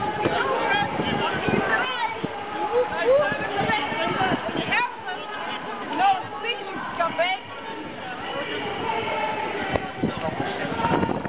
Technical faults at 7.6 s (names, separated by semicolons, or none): none